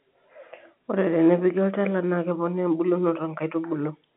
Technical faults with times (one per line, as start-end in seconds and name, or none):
none